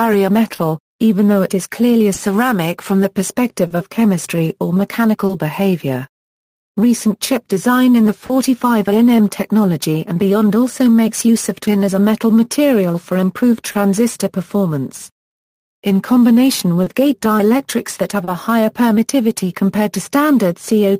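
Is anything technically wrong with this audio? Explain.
Yes. The audio shows clock drift between sender and receiver, along with several other timing faults.

Throughout the clip, the sender's clock runs roughly 2% slower than the receiver's, so the receiver's jitter buffer keeps draining faster than it refills. The receiver has to keep stretching or patching the stream to avoid running dry. This underlies the repeated timing corrections. It is heard as a faint unsteadiness in pacing rather than as one clear event. On a waveform it shows as small, unevenly spaced discontinuities across the whole length.

From 0.55 to 5.32 s, and again from 13.71 to 18.30 s, there are scattered short gaps, about four in each stretch. Each hole was filled by continuing the last sound, about 100 ms in total per stretch, and the longest is around 30 ms. Nothing is actually lost. The sound stays clear apart from brief ticks or smears. 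A spectrogram shows short smeared or frozen vertical slices, and the waveform shows slight seams at each patch.

From 6.81 to 20.47 s, repeated timing corrections slow playback to 99% as the receiver repeats short pieces to keep pace with the slower sender. About 150 ms is added over the stretch. Each edit is small, so the result is a slightly unsteady tempo with occasional hiccups. On a waveform, short segments appear duplicated at irregular spacing. A spectrogram shows features very slightly stretched, with faint seams where pieces repeat.

From 8.26 to 8.32 s, there is a short stall from a late packet. The packet arrived about 30 ms late, the buffer ran empty, and the receiver held the last sound for 30 ms before resuming from the same point. Nothing is missing, but that instant is held too long, with a slight buzz or dip. A spectrogram shows a brief band of frozen, smeared harmonics. 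The waveform shows a short repeated, periodic-looking patch.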